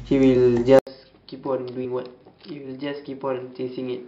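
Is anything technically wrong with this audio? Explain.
Yes, there are two problems.

Starting at 0.79 s and running to the end, the sound goes duller and boxier, with nothing above 5.2 kHz. There's an 80 ms silence at the change, the level falls by around 10 dB, and a new noise floor shows up roughly 55 dB under the signal. That pattern most likely comes from an input switched to a poorer device, with the system jumping mid-recording to a lower-bandwidth microphone or a headset's call mode.

At 1.84 s the audio leaps ahead by about 50 ms. That's compressed frames skipped, with some frames missing or rejected by the decoder as damaged. The frame length is 23.2 ms, so the jump fits about two frames.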